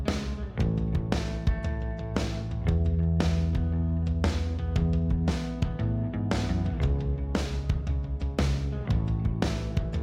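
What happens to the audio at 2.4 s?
Nothing goes wrong at 2.4 s; the audio carries on cleanly through that moment with no dropout, click or distortion.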